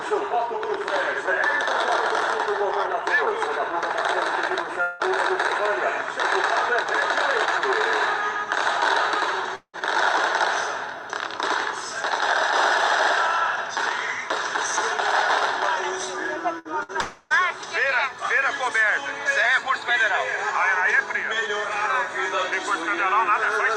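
The audio has three gaps that sound like a long network dropout, likely the cause. They fall at 4.81 to 5.02 s, 9.55 to 9.76 s and 17.01 to 17.33 s. About 180 ms, 180 ms and 300 ms are lost. Each gap is filled by the last sound stretched into a fading buzz or hiss. The second gap also ends in about 60 ms of silence. Two bursts of packet loss sit just before the third gap, at 16.59 to 16.68 s and 16.83 to 16.92 s. Each drops about 60 ms of audio. The receiver holds the preceding sound and turns it down. Then playback jumps ahead past the missing piece.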